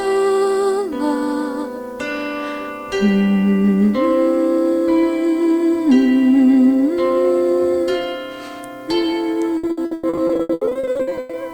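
Near the end of the clip, from 9.57 s to 11.35 s, the audio breaks up with repeated packet loss, producing a choppy, robotic sound. About two dozen short dropouts follow one another, the longest around 100 ms. Each hole is concealed by stretching the preceding sound. In total about 980 ms is synthesized fill, covering roughly 55% of that stretch, so much of the original material in it is missing.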